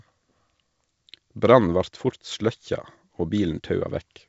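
Nothing stood out on listening to this speech, which comes through G.722 wideband telephone coding at 64 kbit/s with nothing above 7.7 kHz.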